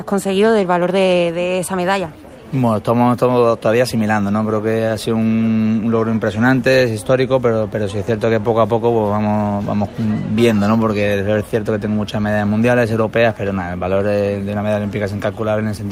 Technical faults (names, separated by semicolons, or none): none